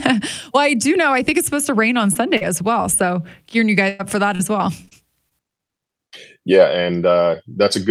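Just after "supposed to rain on", at 2.13–2.17 s and again at 2.37–2.43 s, there is short concealed packet loss. Each time the receiver extends the last sound for a few hundredths of a second, leaving a brief smear rather than an audible gap. The tail of each hole, at 2.15–2.17 s and 2.41–2.43 s just before "as well", is a lost packet rebuilt from error correction. Those 20 ms come from a low-bitrate copy, so they sound rough and grainy instead of smeared.

From 3.89 to 4.93 s, repeated packet loss gives a choppy, robotic stretch. Four holes, the longest 101 ms, cover about a sixth of that second, with part of the loss rebuilt from the error-correction copies. Because the holes keep recurring, the result is repeated chopping rather than one isolated blip.

Further short concealed losses at 5.29–5.33 s and 6.09–6.14 s each leave a single brief wobble.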